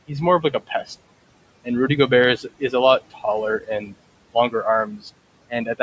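A speech recording with noise suppressor artifacts throughout: the suppressor pulls the room noise down by about 21 dB between phrases, so on a spectrogram the gaps look nearly empty while the noise floor jumps back under each phrase. Speech cut by the noise suppressor occurs at 0.42–0.71, 2.37–2.73, 3.1–3.24, 3.61–3.94, 4.86–5.06 and 5.5–5.8 s. Within each span, a tenth to a fifth of a second of soft sound drops by about 14 to 18 dB. On the waveform these show as sudden dips in the envelope, and on the spectrogram the quiet speech energy fades.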